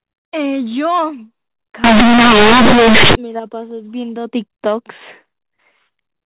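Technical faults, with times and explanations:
1.84–3.15 s: companded audio read as linear. Mu-law bytes play as raw 8-bit samples with no expansion, so each sign change swings across about half the range. The result is loud, buzzy distortion with heavy noise in the pauses. The waveform is bent out of shape, with quiet sounds as large as loud ones, and the spectrogram fills with broadband energy up to 4 kHz.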